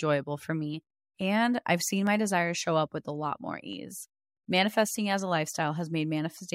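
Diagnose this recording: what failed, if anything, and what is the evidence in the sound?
A single sharp click at 2.07 s, between "I've seen" and "desires show up with", marks dropped samples, likely lost in the driver or buffer stage. A fraction of a millisecond of the stream is missing, so the waveform jumps straight to a later value and the discontinuity shows as one thin vertical line across the spectrum. No sound is audibly removed, which separates it from a dropout, where a gap of silence or a missing syllable would be heard.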